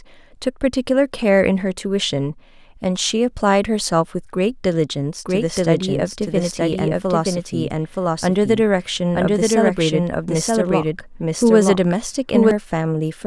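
From 5.25 s to 12.51 s the speech has a doubled audio track. A second copy plays about one second behind, at roughly the same level. It is dry and full-band, and it cuts in and out abruptly. A slower second capture path is the likely cause.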